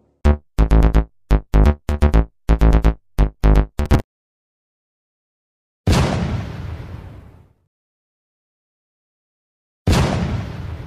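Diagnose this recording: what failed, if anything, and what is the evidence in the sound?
The failure is at the driver and buffer stage: processor overload crackle. Two bursts of gritty tearing sit on the sound, from 3.86 to 4.11 s and from 7.57 to 7.80 s. Each burst stops cleanly once the load passes. The processor missed several buffer deadlines in a row. Each missed slot repeated a fragment of old audio with hard edges. The grain of the crackle fits buffers of around 10 ms, about five missed per burst.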